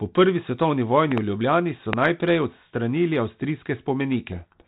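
At 1.12 to 1.20 s a loud pop arrives as a double thump, and another single pop lands at 1.93 to 1.95 s. Both spike roughly 20 dB above the speech, which continues underneath, so nothing drops out as it would in a gap. A brief electrical pulse, likely from a switch or static, is the cause.

From 4.32 s to the end, a codec payload misread buries the speech in harsh distortion. The G.726 stream, otherwise lightly coloured at 32 kbit/s, is being decoded with its code-word bit order reversed. That makes it far rougher than low-bitrate hiss, which would follow the speech level.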